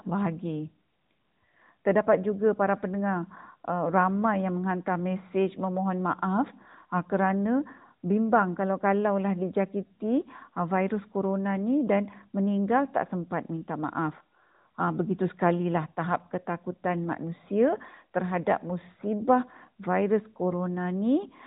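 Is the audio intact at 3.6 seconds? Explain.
Yes, the speech at 3.6 seconds is intact, passing through the AMR narrowband mobile codec with its usual telephone-band limit, nothing above about 3.8 kHz.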